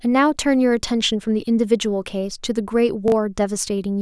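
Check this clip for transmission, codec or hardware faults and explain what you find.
One transmission fault is present: chunks out of order, between 3.08 and 3.12 s. Two adjacent 20 ms chunks swap places, so one block arrives a chunk late and plays after the block that should follow it. The speech briefly jumbles at the hard joins where the waveform no longer lines up. Unlike a dropout or packet loss, nothing goes missing and there is no gap or silence. The full sound is there, just momentarily scrambled.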